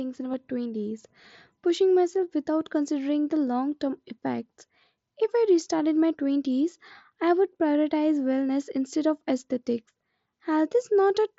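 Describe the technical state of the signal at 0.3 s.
At 0.32 s there is a brief concealed Bluetooth headset packet loss of about 15 ms, which fits two consecutive lost headset packets. The receiver fills the gap by repeating the best-matching recent stretch of waveform, so the sound barely changes, with at most a faint buzzy blip. On a waveform the patch appears as a short, suspiciously periodic copy of the preceding cycles. On a spectrogram it shows as a thin vertical sliver where harmonics hold flat instead of evolving, below the 8 kHz ceiling of the mSBC path.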